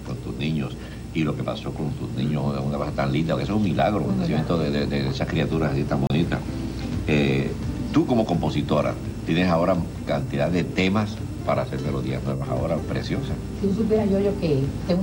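At 6.07 s the audio drops out for about 30 ms and comes back at 6.1 s. That's a block of digital silence: a run of samples got replaced with zeros, which points to the program not filling its output buffer in time. There's no fade in or out, and at this length it comes across as a short hole in the sound.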